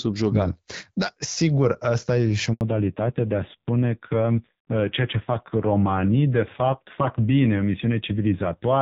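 At 2.53 s, just after "asta e și o", a handover gap cuts the speech for 80 ms while the call switches networks and no frames arrive. The waveform drops to a flat line, and the spectrogram shows a clean vertical blank across all frequencies.

From 2.61 s to the end, a fallback to narrowband follows. Before it, the HD Voice codec carries speech with light coding damage. Afterwards, nothing above 4 kHz remains, and the spectrogram shows a sharp ceiling there. The duller, rougher tone fits a low-rate narrowband AMR mode.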